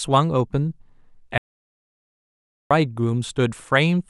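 A speech recording with an audio dropout to silence running from 1.38 s to 2.71 s, so about 1.33 s of the talk is simply missing. The cut is abrupt on both sides and the gap is dead digital silence, with no room tone or hiss underneath, which separates it from a natural pause or a noise gate closing. The input was likely lost, through a disconnection or mute, while recording carried on.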